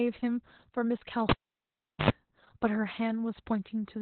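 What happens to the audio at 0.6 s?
At 0.6 s the speech carries Opus voice compression, present throughout. Nothing sounds above 4.2 kHz, and coarse SILK coding, pointing to about 8 kbps, leaves it muffled, hoarse and robotic.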